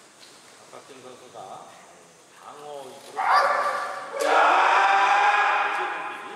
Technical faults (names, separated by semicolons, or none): none